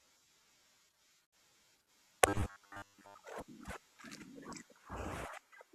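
Speech clip with robotic sound from repeated short buffers between 2.29 and 3.22 s: the voice becomes a rigid metallic buzz near 100 Hz, likely from a 10 ms chunk looped while fresh audio was late, with most of that stretch repeated. A spectrogram shows evenly spaced harmonic stripes, and the waveform shows identical short cycles.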